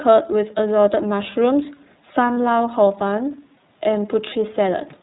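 Throughout, the speech carries plainly audible iLBC codec damage: nothing above 4 kHz survives, and each frame's excitation is coded independently, leaving a rough, slightly synthetic edge. The 30 ms frame rhythm and rate point to iLBC's 13.33 kbps mode, and the roughness differs from plain narrowband filtering.

At 2.33 to 2.37 s come lost iLBC frames. About 30 ms, fitting a single lost frame, is replaced by a repeated pitch cycle mixed with noise, heard as a brief buzzy, held vowel rather than a silent dropout. The voice is right again almost at once afterward, because the next frame decodes without relying on the lost one.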